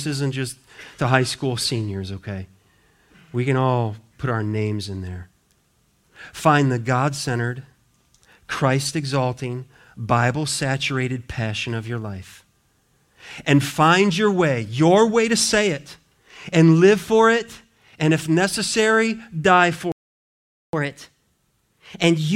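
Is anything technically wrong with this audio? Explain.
Yes, there are two faults. From 19.92 to 20.73 s, right after "and if necessary die", the speech cuts to silence for about 0.81 s, a playback stall, likely from the player running out of data. From 20.73 s to the end, the speech runs 1.1 times fast and about one and a half semitones sharp, a catch-up at higher speed as the player resamples its backlog to regain the lost time.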